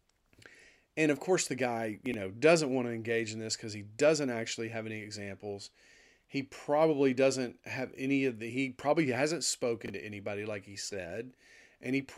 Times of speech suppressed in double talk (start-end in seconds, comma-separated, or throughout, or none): none